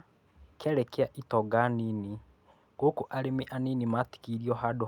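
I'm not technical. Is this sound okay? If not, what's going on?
Yes, no faults here.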